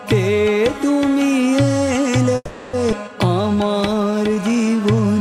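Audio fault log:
2.35–2.76 s, call audio freeze: sound stalls and the last fragment is stretched into a fading buzz for 380 ms, ending in about 20 ms of silence; likely packets delayed until the jitter buffer ran dry, then playback resumes with nothing lost.
2.91–2.95 s, skip ahead: playback jumps forward roughly 200 ms with only a 10 ms bridge, joining the two sides almost directly as a stretch of audio is dropped while later audio is already waiting.
3.42–5.15 s, jitter buffer slow-down: audio runs at 87% speed with unchanged pitch, adding 229 ms through repeated pitch periods, giving drawn-out sounds as the buffer rebuilds its reserve.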